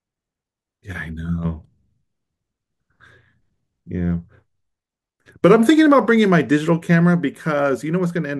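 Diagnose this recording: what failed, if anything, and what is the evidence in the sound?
Nothing failed: no stage in the chain leaves audible evidence of a fault anywhere in this speech recording.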